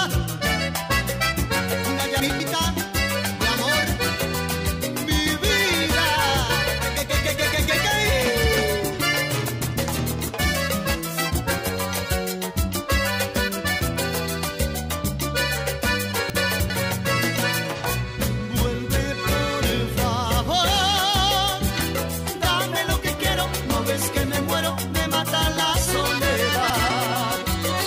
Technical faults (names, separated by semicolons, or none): chunks out of order